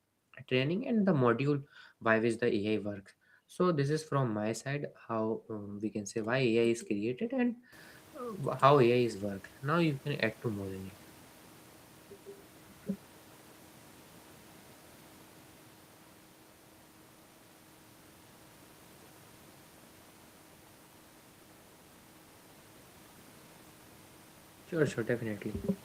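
Nothing technical goes wrong in this speech recording; the only change is the room's own background noise, which climbs by about 21 dB at roughly seven and a half seconds yet still sits about 27 dB beneath the talking.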